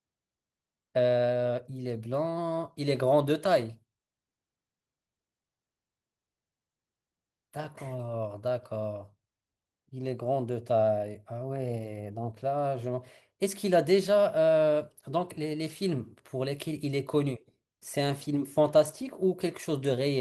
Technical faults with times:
11.41-12.28 drift correction step

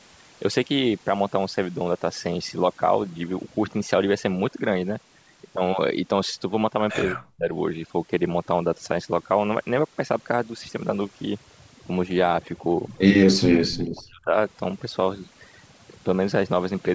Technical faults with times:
0.00-16.94 overdone noise removal
7.14-7.53 speech suppressed in double talk
13.37-14.33 speech suppressed in double talk
13.70-13.77 echo leak

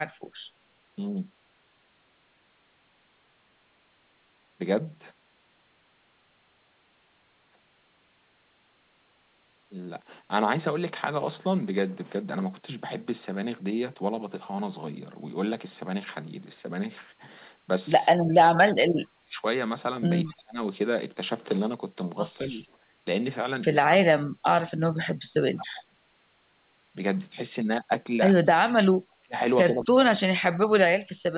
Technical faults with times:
18.13-19.43 speech suppressed in double talk
20.29-20.59 speech suppressed in double talk
22.43-22.63 speech suppressed in double talk
23.90-25.95 speech suppressed in double talk
25.58-25.64 echo leak
29.09-29.36 speech suppressed in double talk
29.70-31.38 speech suppressed in double talk

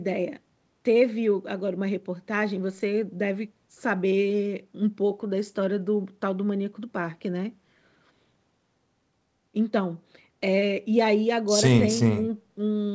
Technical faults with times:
none

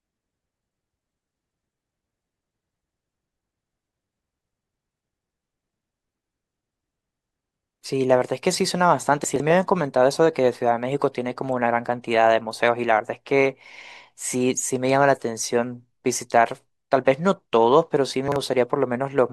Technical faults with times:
9.24-9.40 chunks out of order
18.28-18.36 chunks out of order

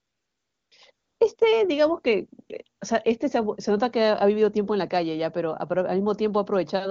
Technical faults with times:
0.00-1.37 AMR comfort noise
2.77-2.81 AMR comfort noise

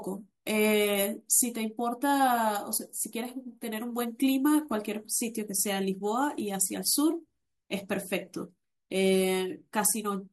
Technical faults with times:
none

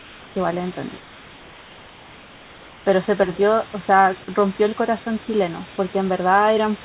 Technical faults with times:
0.00-0.36 comfort noise in place of the background
1.00-2.86 comfort noise in place of the background

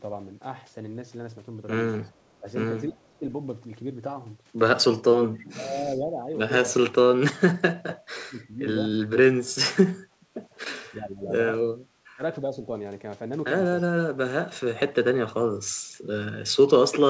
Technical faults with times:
2.05-2.11 echo leak
2.40-3.25 speech suppressed in double talk
5.31-6.74 speech suppressed in double talk
7.38-11.33 speech suppressed in double talk
12.15-12.55 speech suppressed in double talk

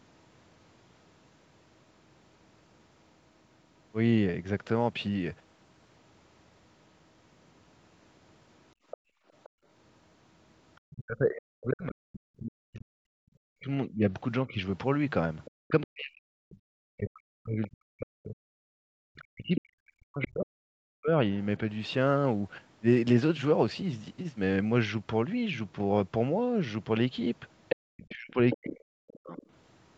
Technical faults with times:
4.66-5.97 Bluetooth SBC bit pool drop
8.75-9.66 background gated by the echo canceller
8.91-10.95 other side's voice leaking through
10.95-21.10 speech suppressed in double talk
15.45-20.25 other side's voice leaking through
15.71-17.11 Bluetooth SBC bit pool drop
18.66-18.82 background gated by the echo canceller
21.69-24.72 Bluetooth SBC bit pool drop
27.69-29.46 other side's voice leaking through
27.90-29.41 speech suppressed in double talk

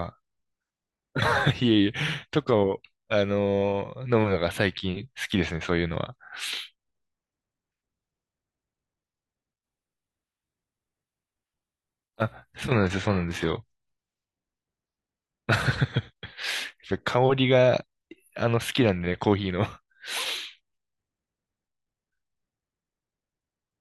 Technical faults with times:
9.63-13.63 adaptive stream at a lower bitrate

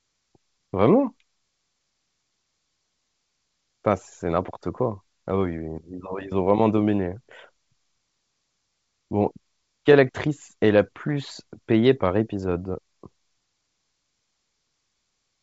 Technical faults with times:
none

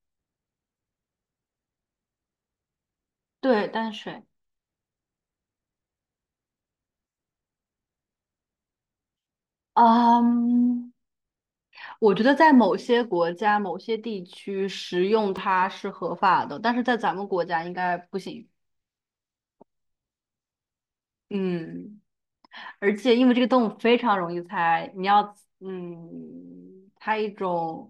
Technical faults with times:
15.37 repeated buffer

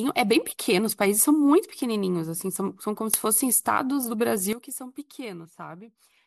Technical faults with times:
4.53-6.26 sudden gain jump

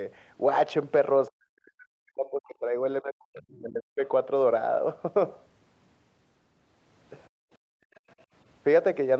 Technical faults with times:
1.28-4.02 speech suppressed in double talk
3.37-3.60 other side's voice leaking through
7.28-8.08 background gated by the echo canceller
7.95-8.12 other side's voice leaking through

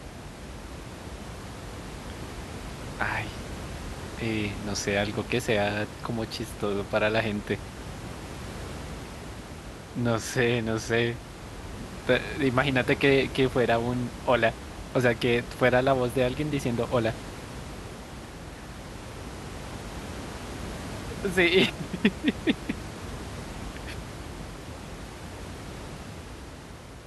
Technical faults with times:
none

